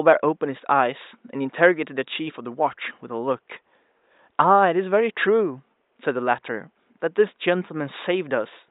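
No technical faults are present anywhere in this recording.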